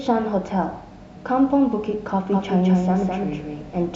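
From 2.32 s to the end, a doubled audio track appears, most likely because the speech is being captured a second time through a slower path, or an edit has left two copies running out of step. A second, full-band copy trails the original by around 200 ms, roughly 5 dB quieter. It cuts in abruptly rather than fading up, and with no decay or room colour it sounds like a flat, stuttering repeat, not a natural echo.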